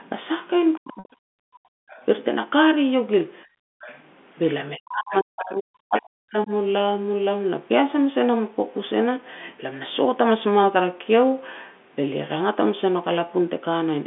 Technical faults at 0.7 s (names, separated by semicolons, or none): other side's voice leaking through; speech suppressed in double talk